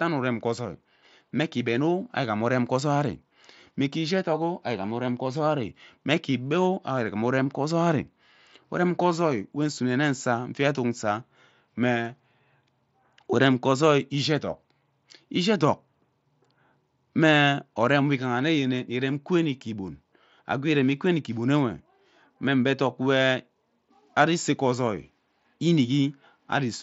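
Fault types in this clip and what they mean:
No fault can be heard anywhere in the speech. It comes over the mSBC Bluetooth headset link, which keeps the audio below about 8 kHz and adds a faint grain on louder syllables, as that wideband headset codec does.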